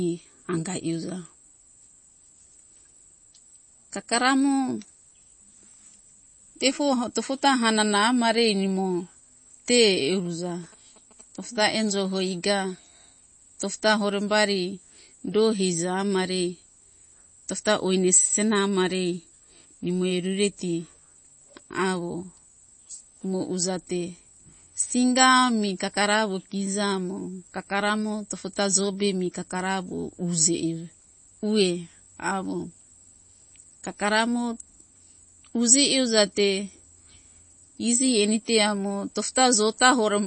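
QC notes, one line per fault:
Throughout: MP3 compression. The treble stops cleanly at about 8.3 kHz, and the speech has a plainly audible watery, swirling texture with smeared onsets. This is likely low-bitrate MP3 coding, and the damage fits a rate around 32 kbps. With so few bits, the encoder discards weaker frequency lines, so they flicker on and off from frame to frame. It also applies a fixed lowpass, which removes everything above that cut-off.
10.17–12.16 s: GSM signalling bursts. For about 2 s a galloping dit-dit-dit of short buzzes sits well beneath the speech, roughly 25 dB down. A nearby 2G phone is sending grouped radio bursts, as it does when signalling before a call or text. The audio circuitry rectifies that RF, turning each burst into a buzz at the 217 Hz frame rate, and the grouping gives the uneven, galloping rhythm.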